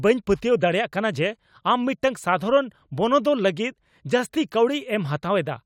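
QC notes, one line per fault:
Nothing to flag here; the speech comes across with no problems worth logging.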